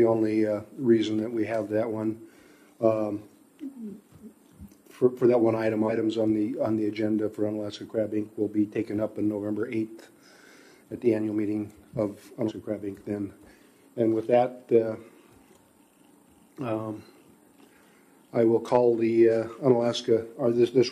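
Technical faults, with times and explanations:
5.86–5.91 s and 12.45–12.52 s, damaged data in a compressed stream: corrupted bytes break frame decoding, and the decoder resynchronises at the next valid header, producing a short chirp, squawk, click or hole.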